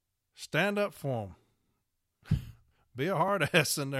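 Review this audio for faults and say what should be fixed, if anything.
There's a jump at 3.28 s in the speech, likely a dropped buffer (overrun), where a couple of milliseconds went missing and the sides butted together. Giving the capture thread more headroom or a bigger buffer should stop it.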